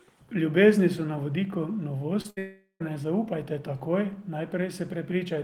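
At 2.21 to 2.26 s there is a short concealed packet loss. About 20 ms of the speech failed to reach the decoder in time, and the receiver covered the gap by extending the preceding sound for roughly 29 ms before crossfading back into the real signal. What you hear is a brief smear in the speech, a wobble where the synthetic continuation meets the genuine audio.

From 2.30 to 2.39 s a burst of packet loss follows. Around 60 ms of consecutive audio was lost or arrived too late to play, so the decoder again extended the last sound, this time for about 63 ms, and attenuated it as the gap went on. A held, fading buzz or hiss replaces the speech, and when playback resumes the content that belonged in that gap is simply absent.

Immediately after, from 2.39 to 2.87 s, comes a long network dropout, likely caused by audio ceasing to arrive for nearly half a second. About 420 ms of speech is missing. 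The concealment stretches the last sound across roughly 416 ms, fading steadily, and ends in about 110 ms of silence before speech returns. The effect is a prolonged decaying tone sliding into a hole, then a restart further along.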